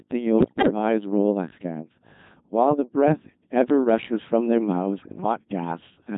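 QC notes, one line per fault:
Throughout: Codec 2 vocoder. The speech has the robotic, buzzy character of a very low-rate vocoder, heavily degraded, and the 2.4 kbit/s rate fits Codec 2. Only pitch, voicing, energy and a spectral envelope survive, and the decoder rebuilds the sound from sine waves, so the original waveform is gone. Unlike bit errors, this colouring is steady and uniform across the whole clip rather than arriving in bursts.
0.38–0.70 s and 5.00–5.18 s: bit errors on digital voice radio. Both bursts break the synthetic speech into bleeps, warbles and garbled gibberish, with sudden jumps in pitch, level and tone colour. Flipped bits corrupt the per-frame parameters, so each damaged frame is synthesised with the wrong pitch, energy, voicing or spectrum. The first burst is longer and far worse, with roughly 15% of bits wrong, against about 7% in the second. Unlike the constant vocoder buzz, these are brief, erratic disruptions.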